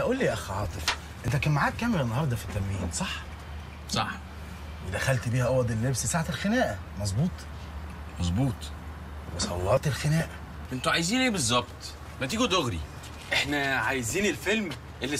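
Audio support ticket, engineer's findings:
DAB burbling at 0.52–0.94 s, 2.40–2.45, 5.39–5.49, 7.80–7.99, 10.05–10.29, 12.05–12.22 s. Short noise blips in single sub-bands. Receiver/MP2 decode: residual bit errors, well under one percent, corrupt sub-band samples and scale factors frame by frame. No timeline jump, unlike a buffer drop.

Jump at 1.28 s and 9.77 s, with the sound skipping ahead, no gap. Likely a dropped buffer (overrun) in capture. Samples overwritten before being read. Lost spans of about 20 ms and 70 ms are spliced shut. A single discontinuity, not burbling's spread-out spectral smear.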